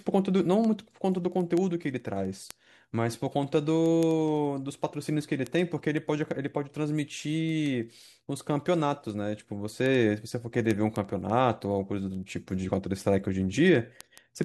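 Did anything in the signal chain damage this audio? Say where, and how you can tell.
Yes, there are word clock ticks at the digital link between devices. Sharp ticks of uneven strength run through the speech at a steady rate of about ten a second from 0.14 s to 14.43 s. The receiver isn't locked to the sender's clock, which fits a mismatch of around 300 ppm, so a sample slips at each tick.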